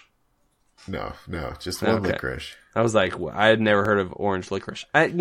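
Two devices running on unsynchronised clocks likely let the buffer between them drift until a short block of samples is dropped or repeated. From 0.1 to 5.1 s of the speech, this clock drift buffer slip recurs every 1.25 s, giving about five regular clicks. That rate fits a clock mismatch of roughly a thousand parts per million.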